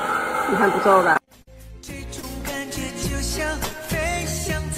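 Brief smears break into the audio at 1.13 to 1.16 s, 1.24 to 1.28 s and 2.20 to 2.24 s. These are short concealed packet losses: 20 to 30 ms never reached the decoder, so the receiver stretched the preceding sound across each hole before blending back into real audio. At 1.42 to 1.48 s a longer stretch turns into a fading held sound and then jumps ahead. This is a burst of packet loss: about 50 ms went missing in a row, the receiver carried the last sound forward while turning it down, and the audio resumed with that portion gone.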